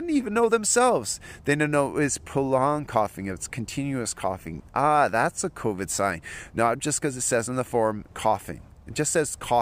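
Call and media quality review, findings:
No faults found in the speech signal: level, continuity and timing stay steady throughout, with nothing to report for any component in the chain.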